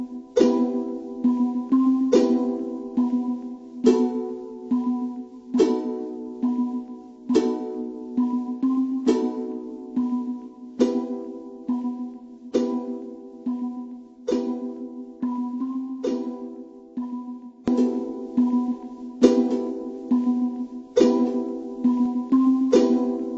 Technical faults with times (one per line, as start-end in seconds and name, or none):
0.00-23.38 wrong sample rate